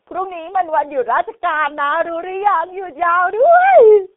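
The whole clip has that G.723.1 codec sound: nothing above 3.7 kHz, heavy low-bitrate damage consistent with about 6.3 kbit/s, leaving the speech muffled, hoarse and smeared on consonants.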